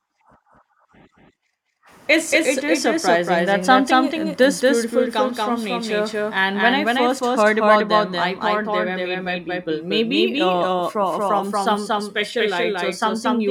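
From the start to the end, every sound is followed by a second, equally loud copy about a fifth of a second later, with no decay or room colour. This doubled audio track is likely from the same signal being captured twice, once through a slower path.

From 12.21 s, just after "from some", until the end at 13.51 s, a fine hiss and roughness rides on the louder, brighter sounds. This is sample clock jitter: timing wobble of around a microsecond puts the error roughly 40 dB below the signal.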